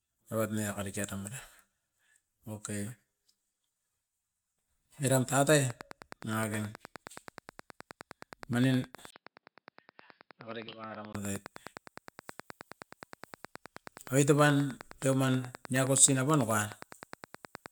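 From 5.70 s to 17.67 s, likely interference or a faulty connection produces a train of clicks: around a hundred regular ticks, 9.5 per second, peaking about 5 dB above the speech.

At 9.10 s the input switched to a poorer device, likely a headset profile, after a 20 ms gap. The speech turns dull above 5.2 kHz and drops about 10 dB until 11.15 s.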